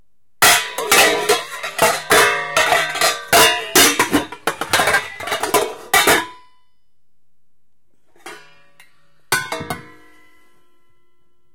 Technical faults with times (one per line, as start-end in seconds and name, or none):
0.42-1.33 hard clipping
1.79-4.98 hard clipping
5.94-6.18 hard clipping